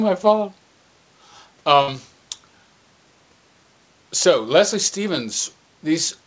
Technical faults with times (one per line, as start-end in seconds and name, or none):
1.82-1.90 burst of packet loss